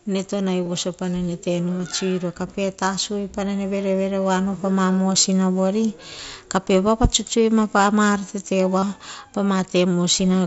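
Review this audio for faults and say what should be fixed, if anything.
Concealed Bluetooth headset packet loss occurs at 0.64–0.70 s, 1.78 s, 7.77 s and 8.79–8.83 s. Lost headset packets were patched by repeating the best-matching stretch of the preceding waveform. This leaves brief buzzy, held fragments rather than the silent gaps or clicks of a plain dropout. To prevent it, keep the headset close to the phone and away from 2.4 GHz interference so packets arrive intact.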